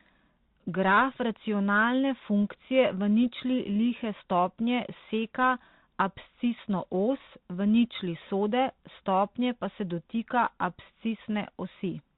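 From start to finish the speech sounds like it came through a Bluetooth CVSD headset codec. The band stops dead at 4 kHz, so everything sounds boxed-in and phone-like. CVSD sends just one up-or-down bit per sample and adapts its step size, and here that shows plainly: s sounds come out scratchy, loud bright moments smear into distortion because the step can't keep up, and a grainy hiss sits under the speech, all of which fits a 64 kbps CVSD link.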